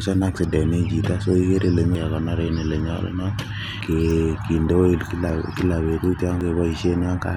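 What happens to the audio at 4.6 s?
Nothing goes wrong at 4.6 s: the speech continues without any dropout, click, distortion or other fault at that moment.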